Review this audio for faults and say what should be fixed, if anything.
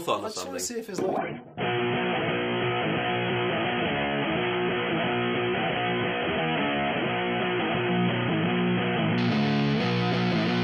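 From 1.18 to 9.18 s the treble abruptly disappears above 3.4 kHz with no gap; an adaptive stream at a lower bitrate is playing, and the sound points to roughly 16 kbit/s. Prevent it by buffering more ahead or capping how far the player steps down.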